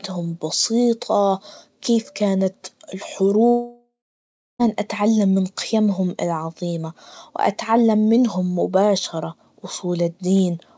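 From 3.48 s to 4.61 s the speech breaks off in what is likely a long network dropout: about 1.12 s of audio never arrives. The receiver stretches the last sound into a fading buzzy hiss, then about 0.67 s of near-silence follows before speech resumes at "أتعلم من قيمهم العظية", with the lost part gone. On a spectrogram the harmonics smear into a decaying blur, then go dark. Throughout, nothing appears above 8 kHz, consistent with a G.722 call path.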